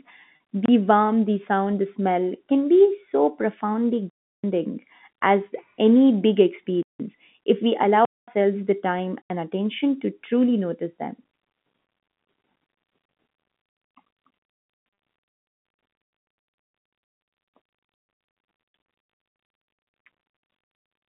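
At 0.36 s and again at 14.94 s, packet loss with pitch repetition: about 40 ms of audio went missing, which fits two 20 ms packets, and the receiver filled the hole by replaying the last pitch period. Each gap is short enough that it comes through as a brief held, buzzy smear in the speech rather than a dropout. The line itself carries the narrowband telephone sound of G.711, limited to roughly 150 Hz to 3.6 kHz.

A block of digital silence recurs five times, each likely where the output buffer was not filled in time and zeros went out instead. The first, at 0.66 s for about 27 ms, lands just before "warmth the sound the" as a short hole. At 4.10 s a 341 ms gap follows "can be so profoundly", which fits a 16384-sample block at 48 kHz. Further gaps come at 6.83 s for 171 ms, at 8.05 s for 226 ms, and at 9.22 s for 85 ms between "the time" and "attention to truly notice". Each cuts hard to silence and back.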